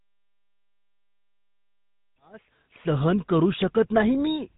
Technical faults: GSM full-rate codec

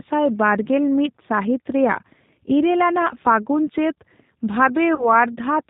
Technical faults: G.729 codec; VoIP packet loss concealed by the speech codec

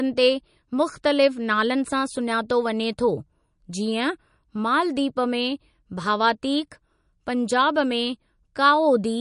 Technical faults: MP3 compression

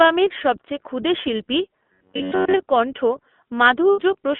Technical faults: iLBC codec; robotic sound from repeated short buffers; lost iLBC frames

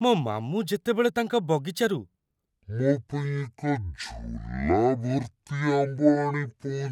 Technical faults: section at the wrong speed

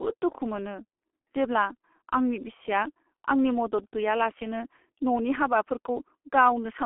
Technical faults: G.723.1 codec

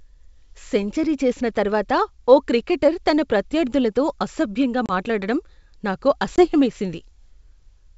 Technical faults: packet loss on an ADPCM call

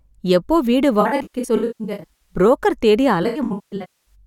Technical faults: AAC frame loss with concealment

